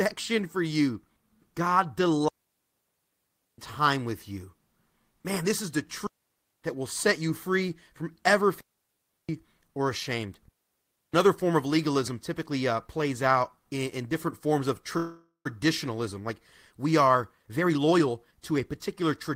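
A speech recording in which a digital wireless link repeatedly lost too much data, so the receiver muted with a very short fade. This digital wireless dropout leaves clean holes of near silence with no noise burst at 2.28–3.58 s (1.3 s), 6.07–6.62 s between "this is the" and "that will set you", 8.61–9.29 s between "you free from ever" and "or ashamed", and 10.48–11.14 s. Packets were likely held up and the jitter buffer ran empty after "in different forms of", causing a call audio freeze from 14.97 to 15.47 s. The last sound is stretched into a fading buzz or hiss for about 0.48 s, including about 0.11 s of silence, and the speech then resumes where it stopped, delayed but with nothing missing. From 17.0 s to the end, a jitter buffer speed-up trims short pitch-period pieces to shed the extra delay, roughly half a second in total. The speech runs at about 119% speed with unchanged pitch and sounds hurried.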